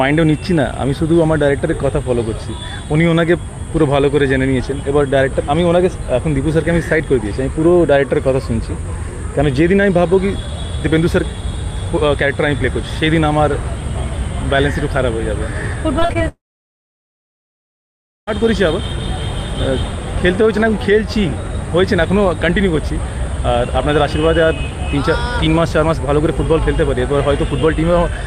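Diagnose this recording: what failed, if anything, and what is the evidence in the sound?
Between 15.99 and 16.22 s the network stage shows repeated packet loss with a robotic sound: four short holes, the longest 38 ms, each patched by stretching the preceding sound, so about 38% of that span is synthetic. The holes are brief and clustered, not one long silence, which marks this as packet loss rather than a dropout.

From 16.28 to 18.29 s the audio stops and is replaced by a short smeared continuation that fades into roughly 1.9 s of near silence, after which sound resumes with that stretch missing rather than picking up where it paused. This points to a likely long network dropout, not a local mute or buffer stall.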